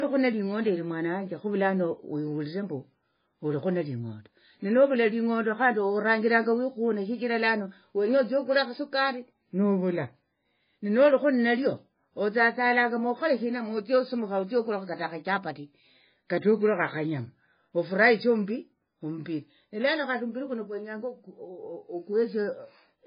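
Throughout the speech, heavy MP3 compression is the likely cause of a hard treble cut-off at 5 kHz and a watery, swirling texture, with sibilants chirping metallically. Weak frequency lines drop in and out between frames, which fits a bitrate around 16 kbps.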